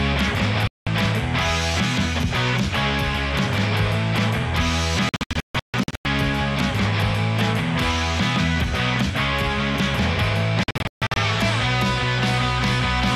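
Digital broadcast dropouts, where the receiver mutes on lost frames: one clean 0.19 s hole at 0.67 s, then scattered short holes over 5.09–6.06 s and 10.63–11.17 s. Both appear as blank gaps on waveform and spectrogram.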